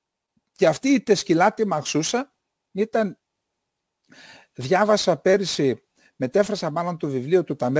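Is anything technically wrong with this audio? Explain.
Yes, there's aliasing running through the whole speech clip. Energy above 8 kHz wasn't filtered before the rate dropped, which fits a conversion from 44.1 kHz down to 16 kHz. It folds back as gritty, metallic sibilance, roughly 25 dB under the speech.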